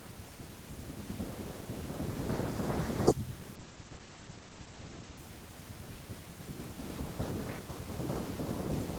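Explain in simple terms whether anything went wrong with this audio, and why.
Something did go wrong: a call bitrate drop from about 3.57 to 5.25 seconds. The connection briefly squeezed the audio into far fewer bits, so the speech loses its crisp top end and turns muffled and watery, then clears up again.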